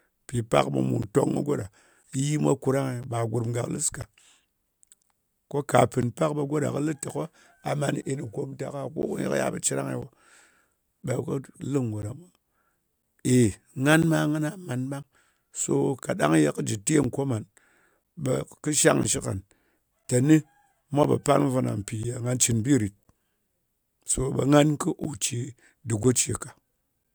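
Periodic USB or driver dropouts run from 1.03 s to 27.05 s, one every 1.0 s, about 30 in all. At each one, something stalls the path between the audio interface and its driver, and roughly 10 ms of the speech is lost and replaced with silence. Because the gaps land on a steady one-second grid, they come through as evenly spaced ticks or pops. These are audible only where the speech is sounding.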